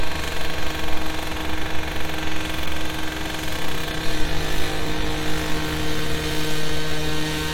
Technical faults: none

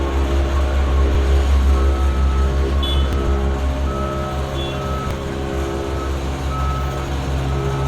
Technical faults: audio missing between chunks; damaged data in a compressed stream

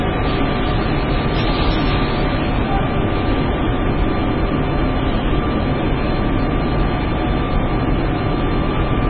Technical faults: MP3 compression

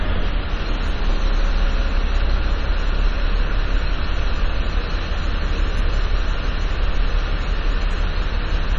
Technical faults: MP3 compression

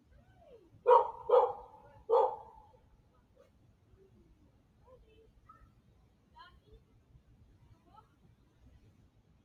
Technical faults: noise suppressor applied to music or sounds; sound cut by the noise suppressor

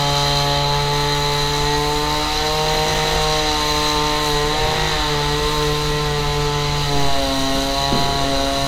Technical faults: none

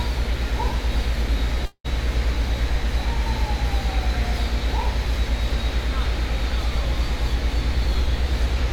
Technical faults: call audio freeze; jitter buffer speed-up

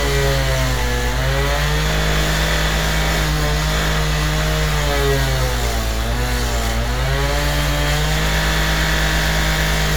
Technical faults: none

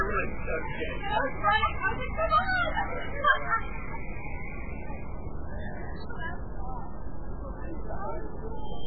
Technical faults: MP3 compression

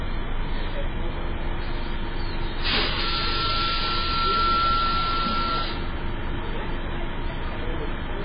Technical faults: MP3 compression

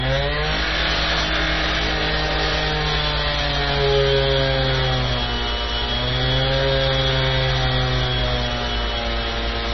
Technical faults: MP3 compression

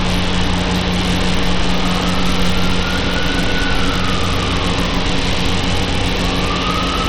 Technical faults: Bluetooth SBC compression

